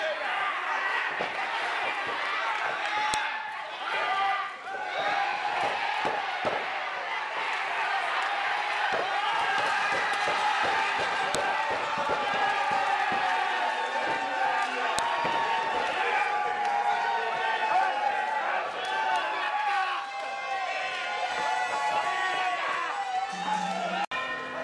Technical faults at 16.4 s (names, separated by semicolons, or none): none